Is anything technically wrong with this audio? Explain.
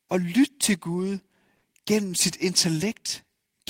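Yes, this speech clip has three related timing faults.

Clock drift between sender and receiver runs through the whole clip. The sender's clock runs about 4 percent slow, so the receiver's jitter buffer keeps draining. On a waveform, syllable spacing gradually stretches against the expected timing, with small irregular seams where material is repeated.

Repeated timing corrections run from 0.21 to 3.65 s, playing back at 97 percent speed and adding roughly a tenth of a second overall. The receiver repeats short pieces to stay in step, heard, if at all, as slight hiccups or an unsteady tempo. A spectrogram shows brief duplicated slices at uneven intervals.

A short stall from a late packet occurs between 1.56 and 1.65 s. The buffer ran empty, so the receiver held the last sound for 60 ms until the packet arrived, losing nothing. It sounds like a sound held too long, with a slight buzz or dip, visible as flat, smeared harmonics on a spectrogram.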